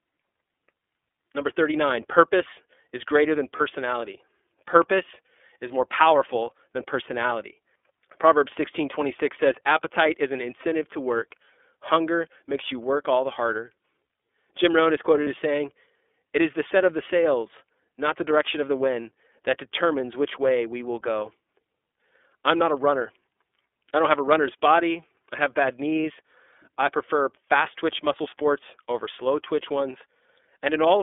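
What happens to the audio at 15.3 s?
Just before 15.3 s, from 15.24 to 15.27 s, there is a brief dropout from lost iLBC frames. The gap of about 30 ms, which fits a single missing 30 ms frame, is filled by the decoder repeating the last pitch cycle blended with noise. It sounds like a tiny held, faintly buzzy vowel. On a spectrogram it shows as a short stretch of flat, repeated harmonics. The waveform shows closely repeating periods, and normal structure resumes right after.

Across the whole clip, including this moment, the iLBC codec is plainly audible. The audio is confined to roughly 300 Hz to 3.5 kHz, with a rough, synthetic edge, in its 13.33 kbps, 30 ms-frame mode. Each frame's excitation is coded independently, which is why the concealed gap recovers so quickly. On a spectrogram, energy stops abruptly at about 3.5 kHz, and there is little below 300 Hz.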